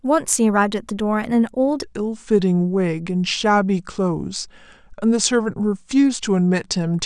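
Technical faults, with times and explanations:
1.83–7.06 s, section at the wrong speed: from 1.83 s to the end the speech turns deeper and draggier, running at 0.82 times its proper rate and sitting roughly three semitones lower, because pitch and tempo fall together. The likely cause is playback against the wrong clock.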